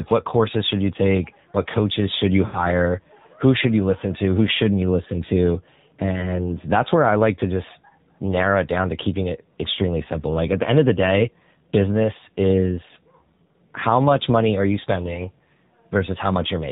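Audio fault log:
Throughout: AMR narrowband mobile codec. Nothing above 4 kHz, and the speech has a plainly audible buzzy, synthetic quality. That fits a low AMR-NB mode near 7.4 kbps, where too few pulses are left to rebuild the voice faithfully.
2.46–2.60 s and 6.20–6.39 s: lost AMR speech frames. These follow "coaches should you" and "shouldn't you listen to", the second ending before "that's where I like". The decoder stretches the last good sound and fades it, consistent with about 80 ms and then 20 ms missing.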